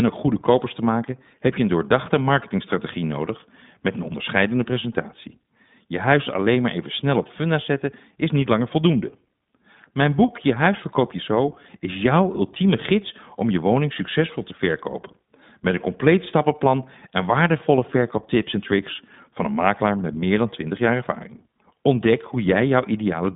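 From start to finish the speech carries the character of the iLBC codec. The passband runs from 150 Hz to 3.7 kHz, with nothing at all above 3.8 kHz, so sibilants lose their edge and the sound is boxed in. Each 20 ms frame's excitation is coded on its own, without reference to the previous frame, and the damage is plainly audible as a rough, slightly synthetic graininess, consistent with iLBC's 15.2 kbit/s mode.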